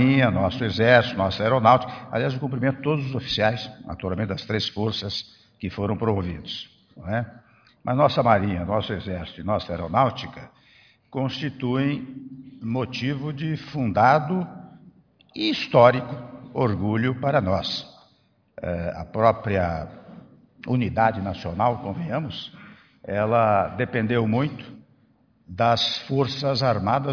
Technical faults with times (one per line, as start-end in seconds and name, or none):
none